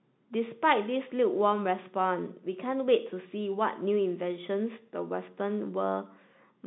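No technical faults can be heard in this telephone-band speech.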